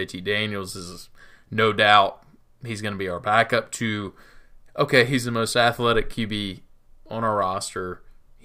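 Speech recording, no technical faults heard anywhere in the clip.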